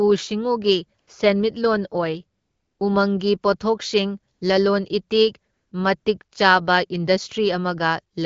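A speech clip carried over wideband AMR, where the light coding leaves the speech clear. The fault is AMR comfort noise. Five times the phone treats the talker as silent and stops sending speech frames. The receiver then fills each gap with smooth synthetic noise in place of the real background. This happens at 0.99 to 1.07 s, 2.39 to 2.79 s, 4.33 to 4.41 s, 5.53 to 5.71 s, and 5.99 to 6.05 s. The longest gap, 400 ms, ends just before "ꯎꯃꯪꯒꯤ ꯄꯣꯊꯣꯛꯁꯤꯡ ꯂꯂꯣꯟ ꯏꯇꯤꯛ". The 80 ms gap at 4.33 s falls between "ꯎꯃꯪꯒꯤ ꯄꯣꯊꯣꯛꯁꯤꯡ" and "ꯂꯂꯣꯟ ꯏꯇꯤꯛ".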